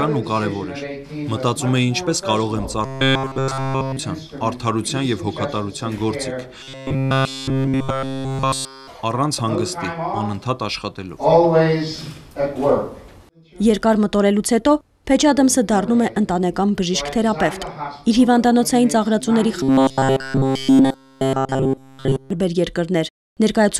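A rigid, metallic buzz at 134 Hz replaces the sound from 2.85 to 3.99 s, again from 6.63 to 8.89 s, and from 19.63 to 22.30 s, still loosely tracing its original contour. This is robotic sound from repeated short buffers. The likely cause is audio arriving too seldom, so fragments of about 7.5 ms are looped for essentially the whole stretch. The fixed repeat rate imposes that pitch while the real audio is skipped.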